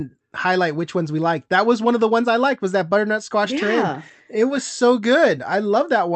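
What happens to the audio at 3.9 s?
At 3.9 s the speech is inside a run of repeated timing corrections lasting from 0.07 to 6.13 s. The receiver trims short slices to keep pace, so playback averages 104 percent speed, heard as faint hiccups and a slightly rushed, uneven tempo. A waveform shows small splices where cycles jump abruptly.

Behind this is clock drift between sender and receiver. The sender's clock runs roughly 4 percent fast, so the jitter buffer keeps overfilling and must shed audio at irregular intervals. On a spectrogram, beneath the Opus band edge at 8 kHz, harmonic tracks show tiny breaks or sideways shifts at those cuts.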